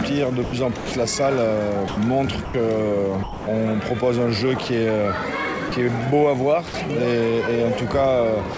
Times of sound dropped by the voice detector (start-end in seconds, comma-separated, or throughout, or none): 0.44-0.92, 1.88-1.97, 2.45-2.54, 3.23-3.47, 5.69-5.72, 6.68-6.74, 8.54-8.58